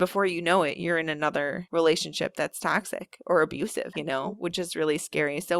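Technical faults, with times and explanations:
No technical faults found anywhere in the speech recording.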